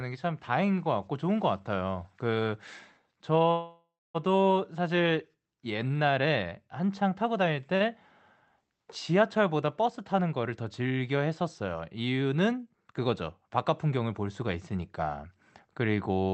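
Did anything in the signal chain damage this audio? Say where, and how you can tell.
Yes. At the network and jitter-buffer stage, a call audio freeze runs from 3.51 to 4.16 s. Packets were likely held up in transit and the buffer ran dry, so the last sound was carried on as a fading buzz. It then drops to about 0.2 s of silence, and the speech resumes where it left off with nothing lost.

The same buffer gives a short stall from a late packet at 7.76 to 7.82 s. One packet missed its playout time, so the receiver held the preceding sound for about 47 ms until it came in. That produces a briefly stretched sound with a slight buzz, and the speech then continues intact.

From 12.51 to 12.93 s the jitter buffer speeds up to drain surplus delay. It removes short pitch-period slices many times in a row, roughly 40 ms in all, so the speech plays about 7% faster at unchanged pitch and sounds briefly hurried. 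The Opus call path, band-limited to 8 kHz, carries all of this.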